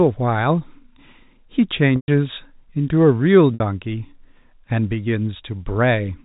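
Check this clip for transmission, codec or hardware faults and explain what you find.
Two dropouts from packet loss with pitch repetition occur, at 1.96 to 2.08 s (120 ms) and 3.54 to 3.60 s (60 ms), within audio limited to the 4 kHz telephone band. At each gap the receiver loops the last pitch cycle and fades it over about 50 ms, so the sound briefly holds as a flat buzz. The longer gap then drops to silence before a quick cross-fade back. On a spectrogram the harmonics run as frozen horizontal lines, and the waveform shows identical repeating cycles shrinking away.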